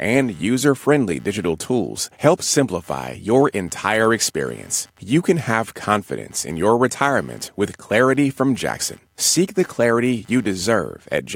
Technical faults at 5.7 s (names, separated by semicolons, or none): computer activity noise